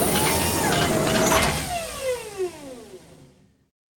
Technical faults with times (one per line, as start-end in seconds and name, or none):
none